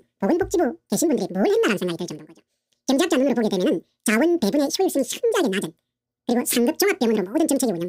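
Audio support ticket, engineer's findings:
Throughout: audio read two samples at a time (double speed). Plays 2x fast, pitch up 12 semitones. Reader treating sample pairs as one frame.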